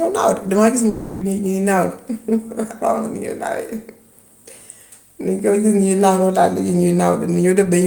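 From 0.89 s to 1.23 s, a long network dropout likely cuts the speech. The last sound is stretched into a fading buzz for about 320 ms. Speech then resumes with that part missing.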